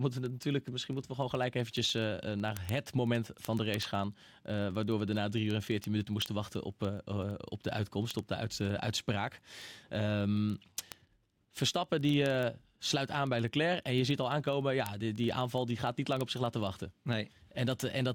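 From 0.13 s to 18.14 s the speech carries word clock ticks, a steady train of sharp clicks roughly every 40 ms, several hundred in all, some louder than others. The receiving device's clock isn't locked to the sender's and drifts by something like 500 parts per million, so at each slip one sample is dropped or doubled. A spectrogram shows evenly spaced thin vertical lines across the whole band. The waveform shows a small one-sample step at each one.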